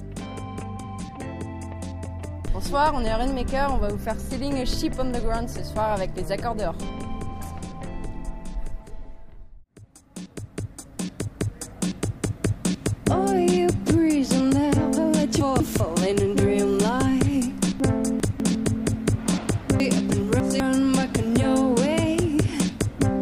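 Four jumbled moments break up the audio: at 0.6 to 1.0 s, 15.4 to 15.8 s, 17.8 to 18.4 s and 19.8 to 20.6 s. These are chunks out of order. A 200 ms block plays late, after one, one, two and then three of the blocks that should follow it, leaving hard joins.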